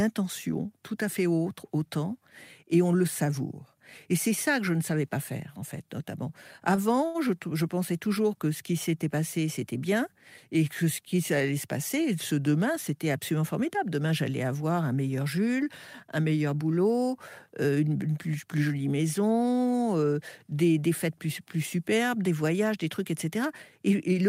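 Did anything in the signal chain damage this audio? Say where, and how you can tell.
Yes. The damage happens at the network stage, as two short stalls from late packets. At 6.75 to 6.79 s a sound is held about 20 ms too long. At 7.06 to 7.16 s a longer hold of about 82 ms follows. Each held sound carries a slight buzz or dip. When a packet arrived late, the jitter buffer ran dry. The receiver stretched the last audio until the packet came, then resumed at the same point. Nothing is missing, but the playout delay grew by each stretch.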